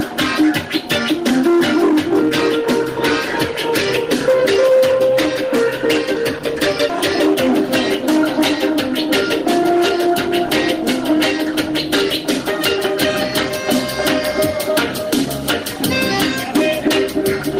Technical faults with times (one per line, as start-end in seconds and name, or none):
6.89 skip ahead
7.27-12.34 jitter buffer speed-up